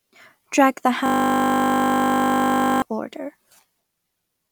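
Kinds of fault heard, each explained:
System hang loop: the system froze while the hardware replayed one 20 ms buffer, so a steady 50 Hz buzz replaces about two seconds of speech.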